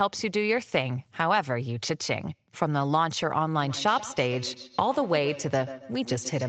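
From 3.54 s to the end at 6.49 s, the speech comes back as a repeat trailing roughly 150 ms behind, at most about 13 dB below the speech. This is a feedback echo between two devices: a second device in the room replays the call, and this microphone picks it up again.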